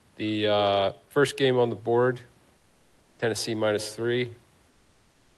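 A speech recording over a call link, with the top end stopping near 12 kHz, in which the room background goes flat twice: from 2.57 to 3.19 s and from 4.69 s to the end it turns into a steady, featureless hiss about 2 dB quieter. This is comfort noise in place of the background, likely from discontinuous transmission in the Opus codec, where the receiver synthesises the pause. At 3.17 s the returning speech starts abruptly, missing its soft beginning. This onset, clipped by the voice detector, probably came from the detector reacting late, so the first moments were never sent.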